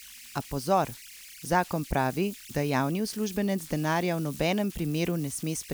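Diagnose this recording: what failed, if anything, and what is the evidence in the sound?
Converter idle tones run throughout the speech clip. A tone sits around 2 kHz, heard in the pauses, and becomes a grainy texture beneath the speech, at about 19 dB below the signal. The fault lies in the converter stage. An undithered delta-sigma modulator, fed a small input, settles into repeating bit patterns. Those cycles produce tones whose pitch follows the input's offset rather than the programme material.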